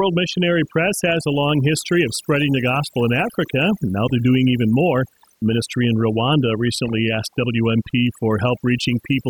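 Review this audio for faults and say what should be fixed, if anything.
The whole speech clip has overdone noise removal. The reduction is set so hard that background gaps drop to near silence with twinkly specks. Back it off to a gentler setting.

There's loose connector crackle from 4.07 to 4.20 s and again from 6.75 to 6.99 s. A worn or dirty contact is making and breaking, chopping the signal into scratchy bursts. Reseat or clean the cables and connectors before recording.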